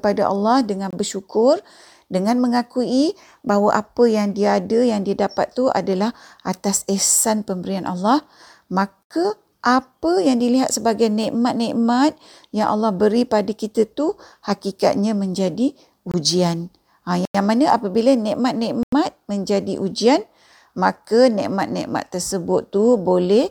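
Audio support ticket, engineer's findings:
Block of digital silence, 5 dropouts in speech: 0.91–0.93 s, 9.03–9.10 s, 16.12–16.14 s, 17.25–17.35 s, 18.83–18.92 s. Hard cut to zero with no fade at each edge. Lengths of 23 ms, 70 ms and 93 ms fit whole 1024-sample buffers (1, 3 and 4). Probable component is the audio output callback, with buffers not filled in time (underrun), so the driver emits zeros.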